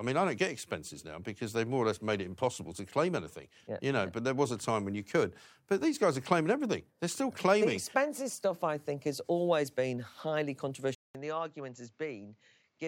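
Right at 10.95 s the speech cuts out for about 200 ms and comes back sounding duller and quieter, roughly 10 dB down, through to the end at 12.88 s. Nothing reaches above 7.6 kHz anymore, and a faint new noise floor sits well under the speech. That's the classic sign of an input switched to a poorer device, most likely the system dropping to a different mic with a narrower band and its own background noise.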